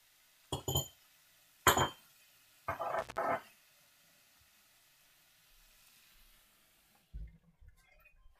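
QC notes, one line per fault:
2.99–3.18 s, intermittent contact: the sound cuts out for about 157 ms, with crackle at the moment the signal breaks and again when it returns, and faint hiss fills the gap. A loose plug or cable conductor briefly lost contact. The scratchy, uneven edges separate it from a digital dropout or buffer underrun, where the cut is abrupt and clean and the gap is true silence rather than open-line noise.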